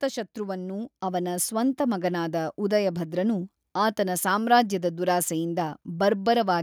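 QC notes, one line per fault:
1.02 s, microphone volume stepped up: voice and background jump together by about 5 dB as the input gain is raised in one step, visible as an abrupt waveform envelope step.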